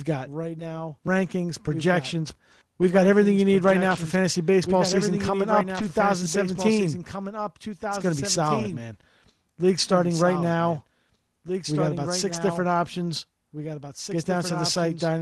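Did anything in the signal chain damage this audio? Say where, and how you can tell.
Yes. A second copy of the whole signal runs about two seconds behind the original and about 10 dB quieter for the entire clip. This is a doubled audio track, likely from a second capture path or an edit that left two out-of-step copies. Unlike an echo or reverb, the copy is full-band and has no decay or room colour.

At 1.07 s there is a small forward jump in the sound, about 10 ms lost and no silence. This is a dropped buffer at the driver or buffer stage, likely an overrun. The sound splices straight across instead of leaving a gap, which is how it differs from a network dropout.

Lost packets rebuilt from error correction occur at the network stage, at 3.91–3.97 s (between "everything you need right" and "for fantasy baseball"), 4.83–4.97 s (before "coming up"), 5.75–5.85 s (just after "coming up"), 8.59–8.73 s and 12.29–12.35 s. 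Each lasts 40 to 80 ms. There is no gap, but the sound turns rougher and noisier in this 12 kHz Opus call.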